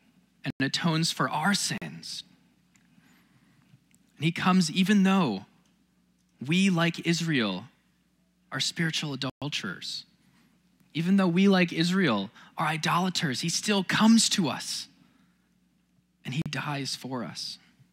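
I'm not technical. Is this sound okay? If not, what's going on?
No. The speech drops out completely four times: at 0.50 s for about 0.1 s, at 1.78 s for 40 ms, at 9.30 s for 120 ms, and at 16.42 s for 40 ms. Each is a block of digital silence, where a chunk of the audio was replaced by silence. The sound stops and starts instantly with no fade.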